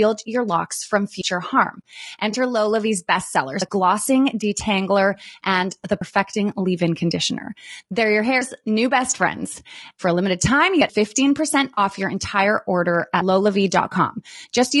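Speech runs through plainly audible low-delay AAC compression, likely AAC-ELD at a bitrate around 32 kbps. Its short frames resolve the pitch harmonics poorly, so the voice sounds rough and grainy throughout, a steady texture rather than anything tied to a moment. Audio missing between chunks produces abrupt skips at 1.21, 3.61, 6.01 (right after "and the"), 8.41, 10.81 and 13.21 s (right after "your entire order"). Each is a hard splice where about a tenth of a second has vanished with no gap left behind. The regular 2.4 s spacing fits a 2.5 s recording chunk that loses its tail at each handover. AAC frame loss with concealment is different: nothing is cut, but a smeared, noisy patch replaces the signal from 2.31 to 2.35 s (one 20 ms frame) and from 11.73 to 11.79 s (two frames, 40 ms, just before "your entire order"), where the decoder rebuilt the missing audio from the last good spectrum.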